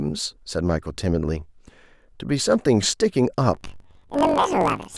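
From 3.54 s to the end at 4.98 s, the speech jumps an octave higher and picks up a fast flutter: planar audio read as interleaved. Each block of all-left then all-right samples is read as alternating pairs, so each block plays twice at double speed, left then right. The roughly 21 ms repeat (about 46.9 Hz) fits a 512-sample buffer. A spectrogram shows harmonics at double spacing, cut by vertical seams every 21 ms. The waveform shows squeezed segments repeating in pairs.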